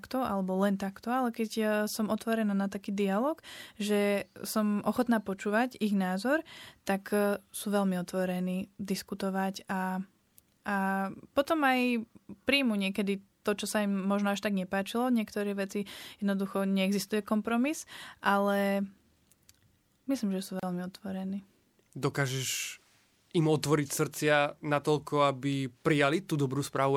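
At 20.60 s the speech drops out and returns at 20.63 s. This is a gap at a join of encoded pieces. The audio was encoded in separate parts and then butted together without trimming. The encoder's start-up delay and the padding on the final frame both stayed in. The result is a hole of about 33 ms. Its edges are smeared by the codec, so the truly silent part is shorter. The speech then resumes exactly where it left off.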